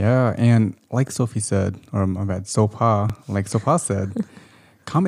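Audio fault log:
1.08–1.10 s and 3.10–3.12 s, overlapping chunks: a click or stutter as 21 ms of speech repeats where 2-second chunks start before the previous one ends.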